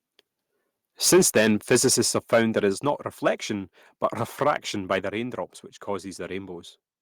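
From 1.04 to 2.59 s the speech has microphone overload: peaks run about 9 dB past the converter's limit, likely from input gain set too high, so syllables crackle harshly and the waveform shows flat-topped peaks. At 1.13 s the microphone volume steps down by about 3 dB, likely the call software reacting to the clipping. This shows as a sudden drop in waveform height and spectrogram brightness. A second step of about 6 dB follows at 2.73 s. Brief overload returns at 2.88 s (about 1 dB over), from 4.04 to 4.57 s and from 4.91 to 4.96 s (both about 3 dB over), each with squared-off crests and smeared high-frequency energy. A final step down of about 4 dB at 5.01 s, just before "raindrops which", lowers the level again.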